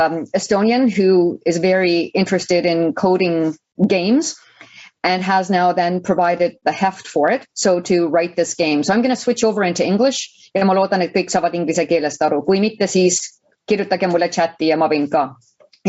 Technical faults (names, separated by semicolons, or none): gain pumping